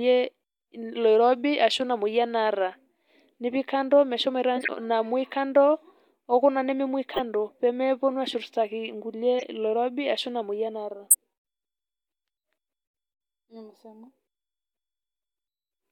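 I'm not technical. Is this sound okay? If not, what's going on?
No. The speech has four brief glitches from a corrupt frame decoded: damaged chunks of compressed audio that the player still played, so sound briefly lands at the wrong pitches as chirps or noise bursts. They occur at 4.56 s after "nipik kando meshomoita", at 7.10 s before "pemeponu ashurtaki nkulie", at 9.39 s after that same phrase, and at 11.10 s, where the glitch is noticeably louder. Each lasts about a tenth of a second or less.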